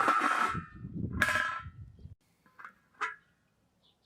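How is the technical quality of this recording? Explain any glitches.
Nothing here needs explaining, since no glitches or technical faults turn up anywhere in the recording.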